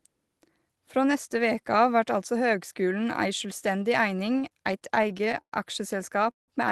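A speech recording over a call path whose top end stops near 12 kHz, which fits an Opus stream at roughly 24 kbps, shows repeated stalls (stutter) from 4.19 to 5.54 s. The jitter buffer ran dry fifteen times, holding the last sound for gaps up to 109 ms, about 20% of that span, seen as smeared, stretched spectral bands. At 6.31 to 6.50 s a call audio freeze inserts a 170 ms gap that drops almost straight to silence, a flat stretch on the waveform, likely caused by packets arriving late.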